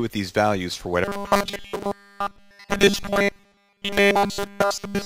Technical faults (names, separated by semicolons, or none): robotic sound from repeated short buffers